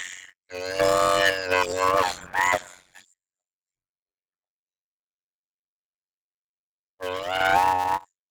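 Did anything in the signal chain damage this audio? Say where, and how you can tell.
Yes. Throughout the speech there is a steady buzz at about 92 Hz, and everything runs at roughly half speed (0.533×) with the timbre unchanged. That is a block size mismatch (padded) at the driver or buffer stage. Short blocks, consistent with 256-sample writes, are zero-filled to a larger read size, so each block carries a gap.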